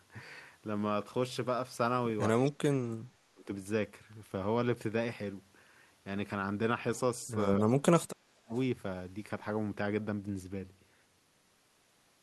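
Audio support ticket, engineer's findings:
Speech suppressed in double talk, 2.43–3.44 s and 7.61–8.54 s: likely echo canceller treating overlapping far-end speech as echo and attenuating both. Near-end speech dips hard, about 35 dB at worst, across most of each span.

Echo leak, 8.54–8.6 s: likely residual loudspeaker pickup passing the canceller. Brief faint copy of the speech returns 243 ms late, roughly 35 dB below the direct level, heard as a scrap right after the second suppression.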